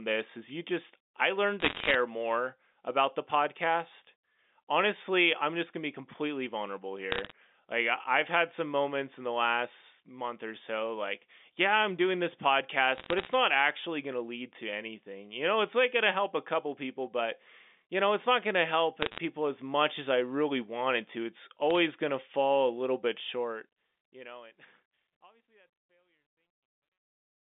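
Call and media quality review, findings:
Bit errors on the digital phone line, G.711 mu-law path: flipped bits corrupt single samples, heard as bursts of sharp ticks and crackle over the speech at 1.60–1.95 s, 7.12–7.32 s, 12.95–13.33 s, 19.02–19.18 s and 21.71–21.76 s. Error rate is roughly 0.4 to 1 percent.

Truncation distortion on the fade-out, 23.14 s to end: an undithered gain stage keeps too few bits, which fits a 12-bit stage, and the waveform breaks into coarse steps as the level falls. The tail turns gritty, worst 24.88–27.54 s.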